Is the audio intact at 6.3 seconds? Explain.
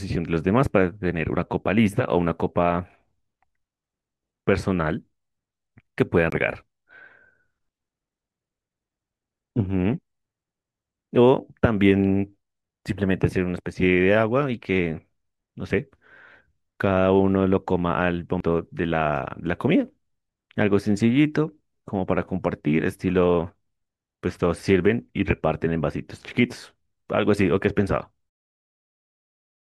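No. A CD skip occurs from 6.30 to 6.32 s. A knock or surface flaw pushed the laser onto a different turn of the disc's spiral track, so the player muted for about 20 ms and then resumed reading from another point in the speech. It is heard as a short tick followed by an abrupt discontinuity, where the speech jumps rather than continuing smoothly through the moment.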